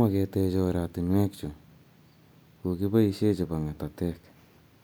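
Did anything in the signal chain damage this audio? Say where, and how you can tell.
No, nothing in the signal chain has audibly damaged this speech recording, and every stage from capture to playback appears to have passed the signal on intact.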